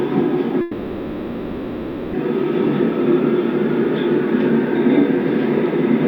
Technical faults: long network dropout

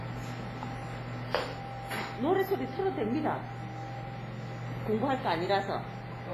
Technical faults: WMA compression

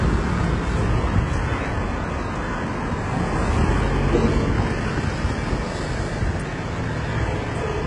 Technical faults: HE-AAC compression

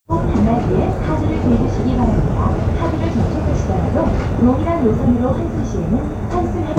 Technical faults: train of clicks

